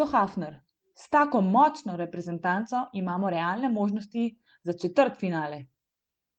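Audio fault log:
No faults heard.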